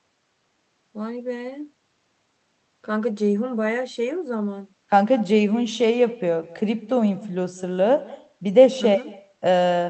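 From start to finish, every phrase of the speech is trailed by a faint, thin repeat arriving roughly a fifth of a second later, sitting about 21 dB below the direct sound. That is echo with no canceller: the far end's loudspeaker output was picked up by its microphone and sent straight back through the call with nothing to remove it. The echo rides on top of an Opus call path whose audio tops out around 8 kHz.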